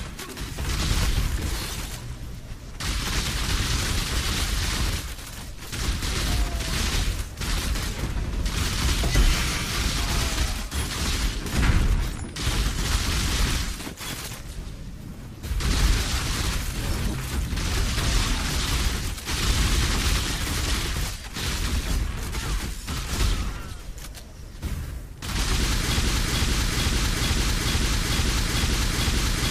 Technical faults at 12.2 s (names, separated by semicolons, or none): none